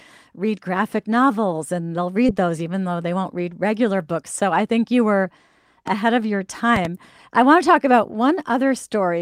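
Short concealed packet loss at 2.27 to 2.30 s, between "graphic novels and they'll" and "those even though they": about 20 ms of the call arrived too late for the decoder, and the receiver covered the hole by extending the sound that came just before it, with about 11 ms of that filler, then crossfaded back into the real signal. The result is a brief smear or wobble in the speech at that point.

Loud pop at 5.88 to 5.90 s, after "I think you were" and before "of your": a single sharp pop about 5 dB above the speech. A second loud pop event follows at 6.76 to 6.87 s, after "of your" and before "I want to talk", with two pops in quick succession about 10 dB above the speech. In both events the speech carries on underneath. The likely cause is a sudden voltage step or pulse from a plug, a switch, static or a driver glitch.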